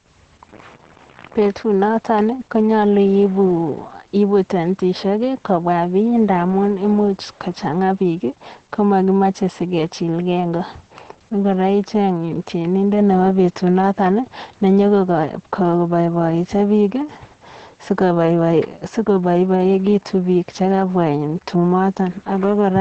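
Throughout, heavy Opus voice compression leaves speech muffled, hoarse and faintly robotic; a spectrogram shows nothing above 8.5 kHz, consistent with SILK-only wideband coding at a low bitrate.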